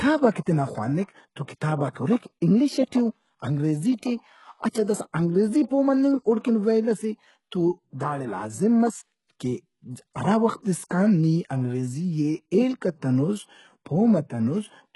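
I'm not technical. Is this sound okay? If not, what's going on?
No. Throughout the speech, the s sounds come out gritty and metallic or lispy, and nothing above about 11.5 kHz survives. This is likely HE-AAC compression: to save space, it faked the upper treble by copying lower sounds upward.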